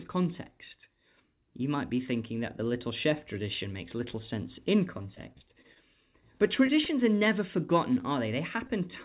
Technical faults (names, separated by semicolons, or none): repeated packet loss (robotic sound); short concealed packet loss